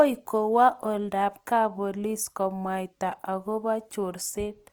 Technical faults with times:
0.00-4.72 Opus compression

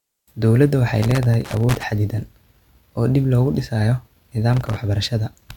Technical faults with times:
1.02-1.84 loose connector crackle
4.53-4.77 loose connector crackle

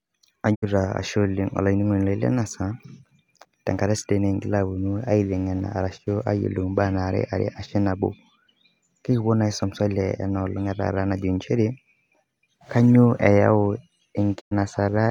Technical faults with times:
0.54-0.64 digital broadcast dropout
14.39-14.53 digital broadcast dropout

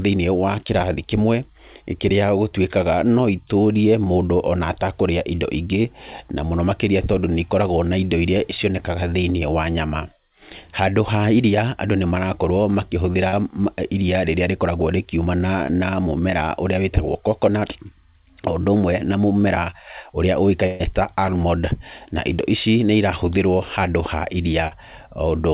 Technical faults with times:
5.82-5.85 short concealed packet loss
13.28-13.33 short concealed packet loss
15.67-15.69 short concealed packet loss
17.60-17.62 short concealed packet loss
19.70-19.73 short concealed packet loss
20.66-20.81 burst of packet loss
24.68-24.72 short concealed packet loss

